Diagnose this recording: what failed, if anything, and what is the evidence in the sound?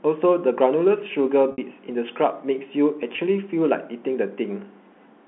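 Packet loss with pitch repetition, network stage, at 1.52 to 1.58 s and 3.16 to 3.18 s. The 60 ms gap, which fits three 20 ms packets, and the single 20 ms gap are bridged by repeating the last pitch period, faded out over about 50 ms. At the 20 ms gap the speech briefly holds a buzzy tone before resuming. At the 60 ms gap it fades toward silence, and the speech returns with a short cross-fade.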